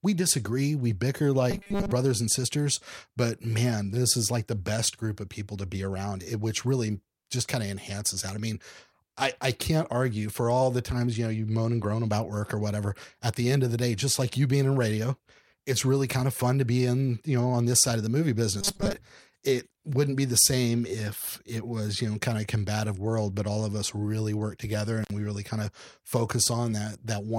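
From 1.51 to 1.91 s, after "disagree we bicker", and again from 18.61 to 18.93 s, after "side of the movie", speech collapses into a rigid, metallic 200 Hz buzz. This robotic sound likely comes from repeated short buffers, with one 5 ms slice replayed while most of the real audio is skipped. Unlike a dropout, sound never stops; it keeps roughly following the words.

At 25.03 to 25.11 s, after "us really work together", an intermittent contact opens for about 56 ms. The audio cuts out with crackle at both edges and faint hiss in the gap, which sets it apart from a clean digital dropout.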